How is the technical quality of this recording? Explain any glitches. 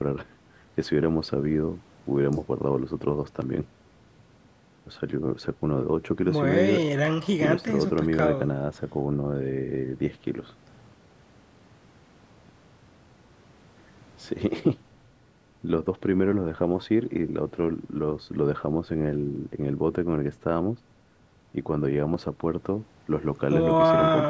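Nothing stood out on listening; the speech comes through the call microphone processing with no audible glitches, its content stopping at 8 kHz and the lowest bass trimmed as that processing normally does.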